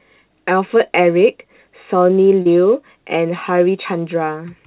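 At 2.42 to 2.47 s, short concealed packet loss briefly smears the speech. About 40 ms of audio arrived too late for the decoder, and the receiver covered roughly 33 ms of the hole by extending the preceding sound before blending back into the real signal. The result is a short wobble rather than a silent gap. An unconcealed dropout would cut to silence, while this fill carries the last sound forward. The call codec's band limit, with nothing above 4 kHz as fits G.711 mu-law telephony, is present throughout.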